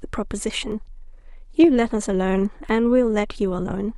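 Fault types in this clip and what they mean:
Overlap between stream segments, at 0.72 s and 2.69–2.71 s: the audio arrives in 1.0-second segments whose time stamps overlap at the joins, so the player trims about 20 milliseconds of real sound there. The waveform jumps, and each join gives a small click or skip.
Loud pop, at 1.64–1.66 s: a single sharp pop sits on top of the speech, peaking about 5 dB above the signal, while the speech carries on underneath. It is likely a brief voltage step or pulse, such as a switch, static or driver glitch.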